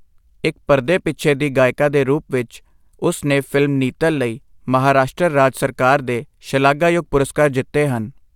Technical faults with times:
none

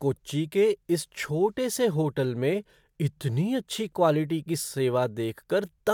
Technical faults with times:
none

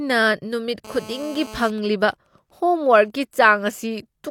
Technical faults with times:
0.85-1.70 GSM phone buzz
1.78-3.53 GSM signalling bursts

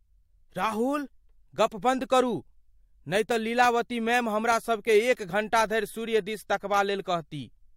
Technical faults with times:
none

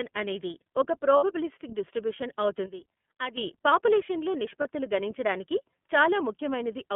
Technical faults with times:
0.00-6.95 iLBC codec
1.17-1.24 lost iLBC frames
2.66-3.38 sudden gain jump
4.62-4.66 lost iLBC frames

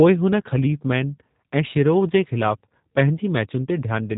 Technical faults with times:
0.00-4.18 G.729 codec

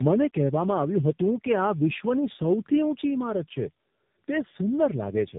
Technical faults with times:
0.00-5.39 tandem speech coding

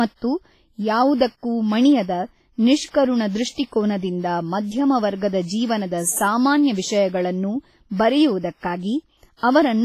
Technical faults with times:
0.00-9.84 WMA compression

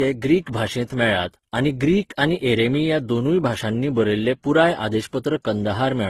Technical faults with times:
0.00-6.09 transcoding between lossy codecs

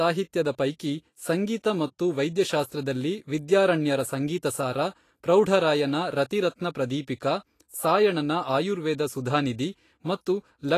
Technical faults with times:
0.00-10.78 Vorbis compression

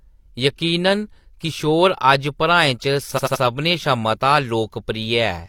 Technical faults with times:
3.14-3.39 repeated frames

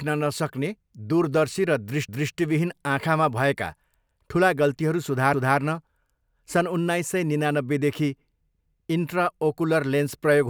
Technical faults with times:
2.08-2.34 overlapping chunks
5.33-5.59 overlapping chunks
8.58-8.84 overlapping chunks

